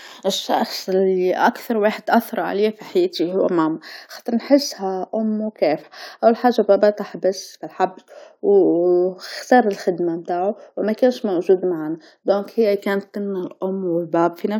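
A tiny skip at 1.94 s, where about 15 ms of speech drops out: an overlap between stream segments, trimmed from audio that wasn't actually duplicated.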